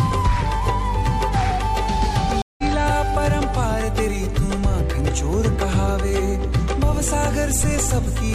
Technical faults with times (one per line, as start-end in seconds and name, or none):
2.42-2.63 stream reconnect